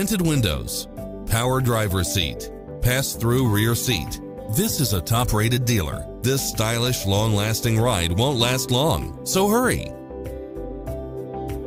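No technical faults can be heard anywhere in this recording.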